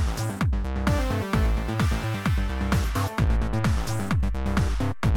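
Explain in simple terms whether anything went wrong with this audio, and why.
Something in the recording chain shifted its idea of silence at about 3.27 s: the baseline the waveform swings around suddenly jumped to a new level, a fault called a DC step. That can happen when a converter recalibrates or an input carrying a steady offset gets switched in. You hear the jump as a single low thump or click at that moment. The offset then lasts until the end, while the sound itself carries on unchanged.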